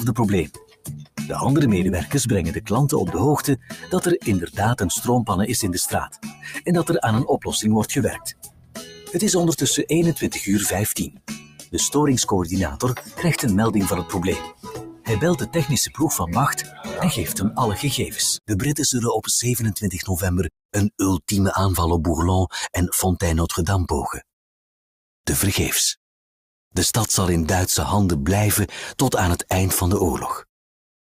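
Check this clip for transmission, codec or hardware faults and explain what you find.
A noise suppressor designed for speech is active on this material, and in places it cuts the sound hard.

Throughout the clip, the noise suppressor, applied to music or sounds, treats steady tones, ambience and decaying tails as noise. Its gain swings by roughly 10 dB, so held material pumps and thins while attacks mostly pass through. A compressor would react to overall level; here the dips follow how steady the sound is, not how loud it is.

The suppressor also cuts sound harder at 0.46–1.19 s, 3.57–4.58 s, 6.06–6.68 s, 8.13–9.13 s, 11.04–11.74 s, 12.69–13.23 s and 14.04–18.51 s. Drops reach about 13 to 20 dB, deepest near 0.5, 8.1 and 11 s. The longest stretch, 14.04–18.51 s, has about two seconds of sinking in total. Sustains sag and tails shorten while transients survive.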